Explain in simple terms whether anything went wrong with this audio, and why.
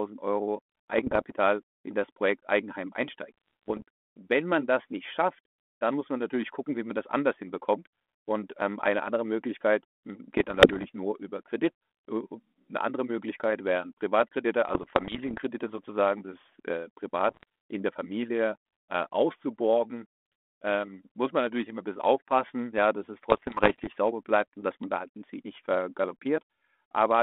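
Something did go wrong: there are bit errors on an ADPCM link, the kind of digital phone connection a cordless handset uses. Flipped bits throw off the decoder's running guess about the sound, so each hit smears into a short rough patch with pops and jumpy loudness. You'll hear them at 0.98 to 1.32, 3.38 to 3.82, 10.37 to 10.86, 14.69 to 15.43, 17.29 to 17.43 and 23.3 to 23.88 seconds, over speech with a typical narrow phone sound.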